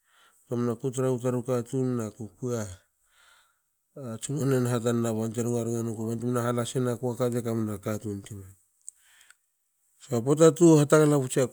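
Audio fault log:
No faults detected in playback.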